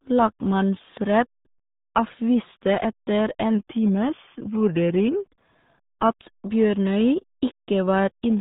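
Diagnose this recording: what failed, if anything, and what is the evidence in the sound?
The codec stage failed throughout: this is the RealAudio 14.4 codec. Nothing above 3.8 kHz survives, and the speech is heavily muffled with a gargly, watery texture, which fits an 8 kbit/s stream from a low-rate model-based speech coder. Simple band-limiting, such as a telephone line or a low-pass filter, would dull the top end but leave the speech clean. Here the waveform itself is rebuilt crudely, so the damage appears inside the remaining band too.

Between 3.55 and 5.15 s the playback slows by about 5.6 % and the pitch drops by about 99 cents, nearly a semitone. That is a drift correction step, likely from clock-matching software at the buffer stage that briefly lowered the playback rate to refill its buffer. Speed and pitch move together by the same ratio and hold steady for the whole stretch. 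That separates it from wow or flutter, which wobble continuously, and from a pitch-shift effect, which would leave the timing unchanged.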